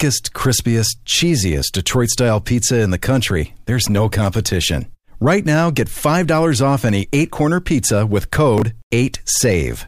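Chunks out of order at 8.58 to 8.62 s: one 20 ms chunk of the speech arrived a chunk late and plays after the piece that should follow it. Nothing is missing, but the swapped order leaves three hard joins, heard as a brief jumbled stutter.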